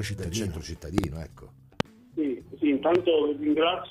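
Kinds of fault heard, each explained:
Loud pop: three bursts land on top of the audio, a quick double pop from 0.98 to 1.06 s, then single ones at 1.80 to 1.83 s and 2.95 to 2.98 s, each jumping roughly 20 dB above the surrounding level while the sound carries on underneath. That sharp, thumpy character is what you get when a sudden voltage step or spike gets into the signal chain, likely from a plug, switch, static discharge or a driver glitch.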